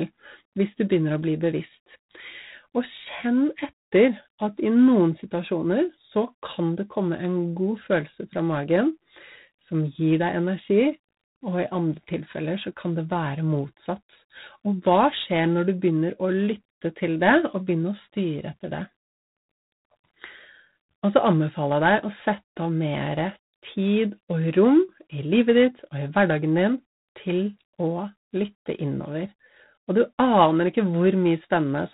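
From start to finish the speech carries G.726 ADPCM coding damage: a harsh, rasping hiss that rises and falls with the speech level, and nothing above 4 kHz. That grain points to 24 kbit/s, where too few bits per sample leave each prediction error coarsely quantised.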